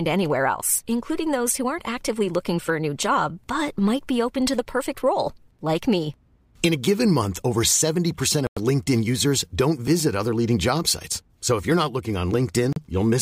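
At 8.47 s the speech drops to a clean silence of about 99 ms, then resumes at 8.58 s; a shorter 36 ms gap follows at 12.73 s, just after "if you're not looking". On a waveform each shows as a flat, near-silent block; on a spectrogram, a narrow vertical band empty at all frequencies. This is a Bluetooth stall, likely from interference delaying packets until the headphones' buffer emptied and playback paused.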